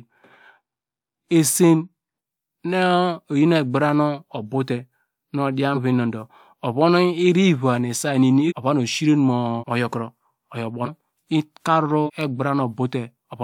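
Compressed frames skipped at 5.74, 8.48, 9.59, 10.85 (just after "knoro oyo") and 12.05 s: whole frames of about 46 ms went missing or were rejected. At each one the speech lurches forward by roughly 0.15 to 1 second.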